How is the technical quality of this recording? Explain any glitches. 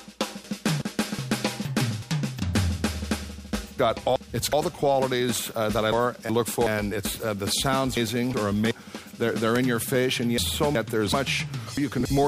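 Poor: the audio is disrupted seven times by the same reordering glitch. Frames out of order occur at 0.44–1.19, 1.65–2.40, 3.79–4.53, 5.92–6.67, 7.97–8.71, 10.38–11.13 and 11.77–12.27 s. Two neighbouring blocks of frames arrived swapped and were decoded in that order, each about 372 ms long (the last about 279 ms). Each stretch plays with its halves exchanged, giving a garbled flutter, though no time is lost.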